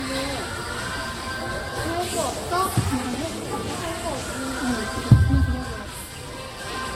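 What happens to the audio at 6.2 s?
At 6.2 s the audio carries the same generation loss heard across the whole clip: a swirly, hollow texture, smeared transients with blurred attacks, and nothing above about 16.6 kHz. The likely cause is a lossy codec such as Vorbis being decoded and re-encoded around seven times, at a rate near 58 kbit/s. Each pass quantises on a shifted frame grid, so the noise and spectral holes pile up. A single encode at that rate would sound cleaner and less smeared than this.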